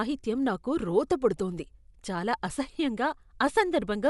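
From start to finish the speech sounds dull and band-limited, with nothing above about 11.4 kHz, and a rough, fluttering hiss clings to the voiced tones. This is likely Dolby Digital compression at a low rate, consistent with about 64 kbps: the encoder narrowed the band and left many frequency lines without mantissa bits, so the decoder filled them with dither noise. That grainy noise-fill, rather than the hollow, warbling gaps of other lossy codecs, sets it apart.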